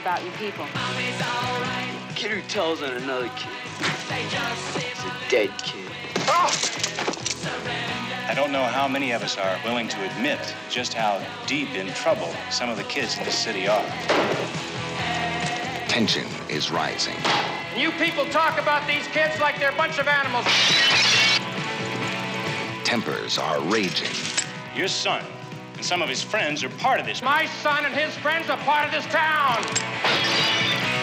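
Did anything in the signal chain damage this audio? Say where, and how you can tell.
Yes, at the sample-rate converter: the resampler restarted on every block. A steady tick runs at 25 per second across the whole clip, only while there's signal, which fits 40 ms blocks each upsampled separately, likely from 24 kHz to 48 kHz, leaving an error at every edge.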